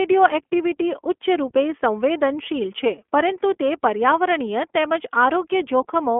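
Throughout, iLBC codec damage is plainly audible. The band runs about 250 Hz to 3.4 kHz, which fits narrowband iLBC, here in 20 ms frames at 15.2 kbps. Speech sounds rough and synthetic.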